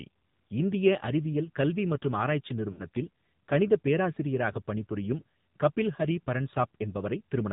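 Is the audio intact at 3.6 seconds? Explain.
No. At 3.6 seconds the speech passes through an AMR narrowband mobile codec, as it does across the whole clip. Nothing above 4 kHz survives. A few pulses drive a vocal-tract model, so the voice sounds plainly buzzy and synthetic, which fits a low bitrate near 7.4 kbps.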